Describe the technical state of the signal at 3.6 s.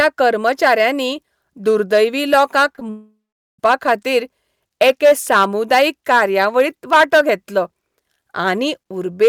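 At 3.6 s the sound is just returning from a long network dropout spanning 2.90 to 3.59 s, likely caused by lost packets. The receiver stretched the last sound into a fading buzz, leaving about 0.42 s of silence, visible as an empty spectrogram gap that ends abruptly here.

Hard clipping runs through this moment too. The signal is driven about 10 dB past what the chain can pass, so a few percent of samples are cut flat. The waveform shows squared-off peaks, and the spectrogram shows harmonic smear reaching high frequencies, heard as harsh fuzz on loud syllables.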